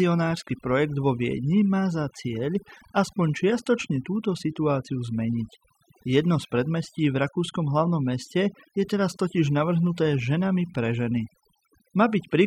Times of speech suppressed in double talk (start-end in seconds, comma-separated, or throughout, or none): none